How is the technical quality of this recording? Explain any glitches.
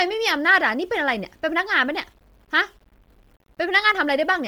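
Two faults run through the whole speech clip, so the quality is pretty rough.

Low bit depth without dither: there's a grainy, signal-following grit, most noticeable on the quieter sounds. That's likely coarse rounding to roughly 9 bits with no dither, leaving the error sitting only about 40 dB under the signal.

Bluetooth LC3 compression: on top of that, the voice has a breathy, gritty sheen, with the upper band sounding noise-filled rather than detailed, even though content reaches up to 20.2 kHz. The heavy damage fits an LC3 encode at a low bitrate, around 32 kbps with 10 ms frames.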